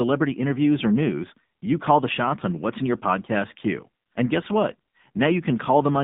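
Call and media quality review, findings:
AMR narrowband mobile codec, throughout: buzzy, synthetic speech from sparse-pulse vocal-tract coding; spectrogram blank outside 150 Hz to 3.7 kHz, fitting low-rate AMR-NB near 7.4 kbps.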